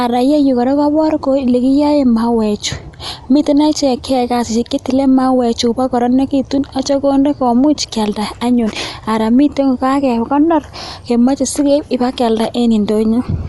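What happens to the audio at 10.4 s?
At 10.4 s you're hearing the same thing that runs through the whole clip: the speech sounds dull and muffled, with nothing above about 11.5 kHz, and there's a rough, fluttering noise hanging around the tonal parts. That's likely Dolby Digital compression at a low bitrate, something like 64 kbps. The encoder narrows the band and gives many frequency lines no real detail, so the decoder fills those gaps with noise.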